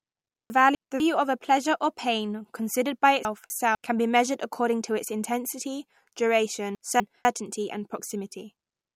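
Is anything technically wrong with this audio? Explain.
Yes. Three times the speech jumbles: from 0.5 to 1.0 s, 3.25 to 3.75 s and 6.75 to 7.25 s, the sound garbles, briefly backs up, then jumps forward. These are chunks out of order. In each span a 250 ms block of audio arrives one chunk late and plays after the block that should follow it. Nothing is dropped, but the swap leaves hard joins.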